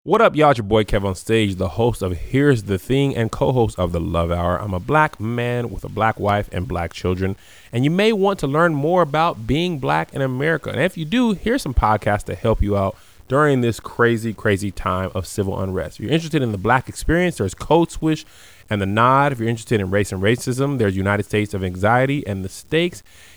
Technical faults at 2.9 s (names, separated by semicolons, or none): low bit depth without dither